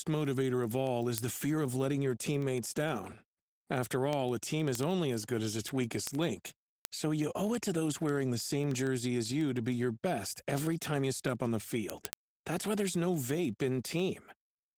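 From the first moment to the end, the speech carries plainly audible Opus voice compression. It sounds muffled, hoarse and faintly robotic, which points to a low bitrate around 16 kbps in hybrid mode: a linear-prediction coder below 8 kHz and a coarse transform layer above. A spectrogram would show smeared harmonics and blotchy, patchy energy above 8 kHz.

From 0.17 s to 14.77 s, word clock ticks run steadily at roughly one every 70 ms. The receiving device's clock runs a few hundred parts per million off the sender's, and each slip drops or repeats a single sample. The ticks are sharp and of uneven strength. They would appear on a spectrogram as thin vertical lines spanning the full band, evenly spaced, and on a waveform as tiny single-sample steps.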